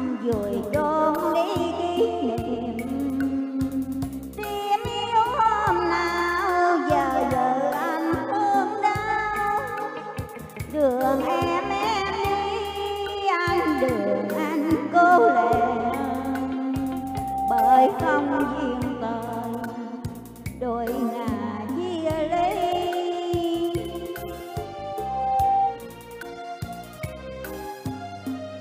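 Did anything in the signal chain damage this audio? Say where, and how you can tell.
Yes. A 784 Hz tone swells over about a second into a squeal at 16.71–17.98 s (about 10 dB above the signal) and 24.50–25.84 s (about 5 dB). This loudspeaker feedback squeal is acoustic and analogue: the microphone hears its loudspeaker, and loop gain above one lets that tone grow.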